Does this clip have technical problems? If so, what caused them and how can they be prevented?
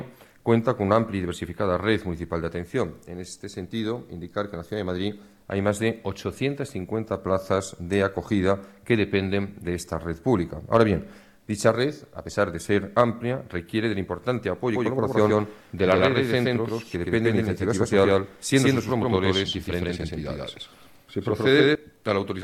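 Yes. From 14.69 to 21.75 s there is a doubled audio track: an equally loud copy trails by roughly 150 ms and starts and stops abruptly, with none of an echo's decay. The likely cause is a second, slower capture path mixed in alongside the original. Prevention: route each source through only one capture path and check for duplicate monitoring or loopback inputs.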